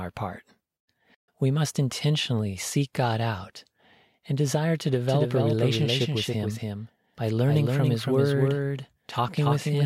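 This speech clip carries a doubled audio track from 5.07 s, just after "and desire to", through to the end: a second full-band copy of the speech trails the original by roughly 300 ms, about 5 dB quieter, with no decay or room colouring, and cuts in abruptly. On a spectrogram every harmonic stack and onset reappears as a fainter twin shifted right; the waveform shows echoed envelopes. The likely cause is a slower second capture path mixed back in.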